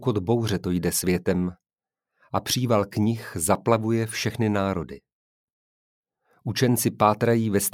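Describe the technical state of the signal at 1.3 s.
At 1.3 s the signal is intact, with no dropout, distortion, clipping or other technical fault audible at that point.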